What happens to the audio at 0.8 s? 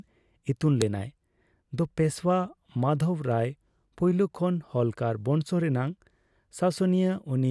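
At 0.82 s a file header is played as audio: a joined or streamed WAV piece kept its header, so those few dozen bytes of metadata are read as sample values. The result is a sharp, loud click in the speech at that instant.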